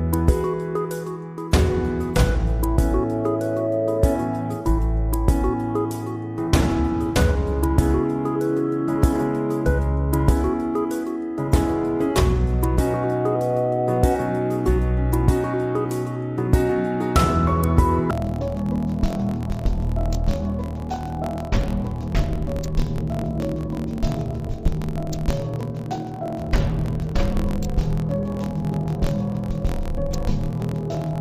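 From 18.11 s to the end, the sound drops an octave and turns doubled and choppy. This is interleaved audio read as planar: each 23.22 ms block, which fits a 1024-sample buffer, has its alternating left-right samples split into halves, each playing at half speed.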